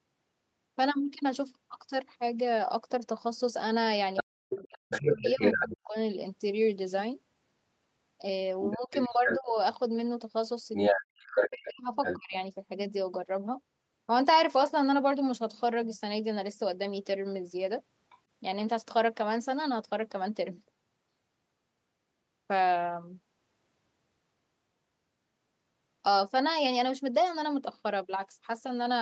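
From 4.16 to 5.76 s, the echo canceller likely failed to remove the far end's voice, which the loudspeaker fed back into the microphone, so the other side's voice leaks through at a level just under the talker's. At the same time, from 4.23 to 5.95 s, the canceller likely could not separate the talker from that echo during double talk and turned both down, so the talker's speech is suppressed in double talk. It sinks almost to silence in pieces over roughly a second and a half.

The same pair returns at 8.63 to 9.4 s, where the leaked voice is about as loud as the talker. Between 8.76 and 9.57 s the talker's speech is pulled down hard, though not to silence, for about half a second in total.

From 10.73 to 12.17 s the leakage is slightly louder than the talker's own voice. From 10.91 to 12.36 s the talker drops out nearly completely in stretches adding up to about a second.

At 18.1 s a brief, very faint scrap of the other side's voice slips through on its own, with no suppression of the talker.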